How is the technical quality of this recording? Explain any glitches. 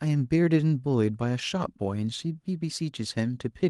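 No glitches are audible anywhere in this speech recording.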